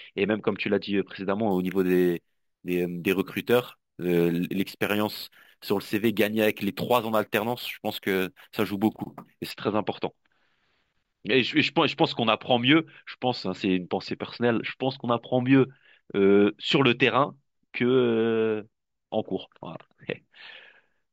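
From 1.51 to 9.51 s, imaging from sample-and-hold upsampling adds a metallic fizz between 8 and 16 kHz, about 21 dB down. Unsmoothed repeated samples cause it.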